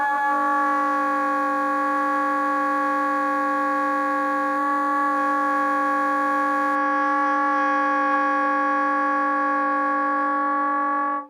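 From 0 to 6.76 s, a nearby DECT cordless phone's radio bursts, repeating every 10 ms, get rectified in the audio circuit, producing a thin, steady 100 Hz buzz roughly 25 dB below the sound.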